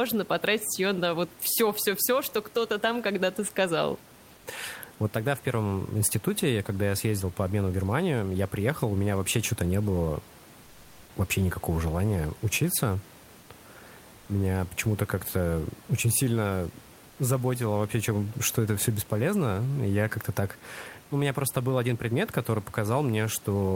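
In this speech recording, the room's background turns flat and featureless, about 2 dB quieter, at 10.63–11.03 s after "не было", 13.39–13.47 s and 14.19–14.27 s. This is comfort noise in place of the background, likely from Opus discontinuous transmission.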